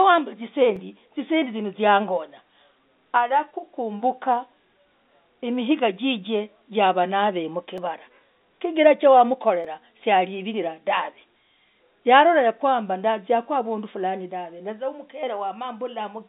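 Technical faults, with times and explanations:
0.76 s, 7.78 s and 9.64 s: repeated buffer. Each time, fresh audio arrived late, so the playback device replayed its last block of about 5.8 ms, which fits a 256-sample buffer. Because that block is so short, the hard joins make a brief click rather than a stutter, heard over the narrow telephone band.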